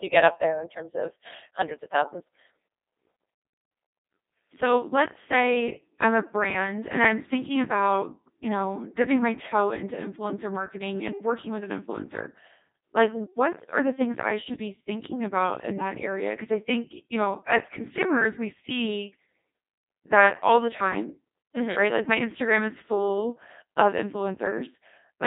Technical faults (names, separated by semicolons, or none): Codec 2 vocoder